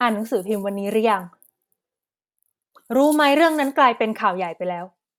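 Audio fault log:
No fault can be heard anywhere in the speech. There is nothing to log.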